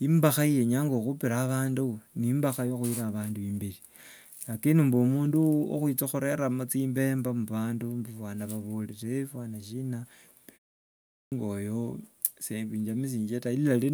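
At 10.84 s, following a pause of about 0.34 s, the speech resumes with a clipped start after the pause: roughly 480 ms, up to 11.32 s, is missing, so the speech bursts in abruptly without its onset, as the output device wakes too slowly from idle.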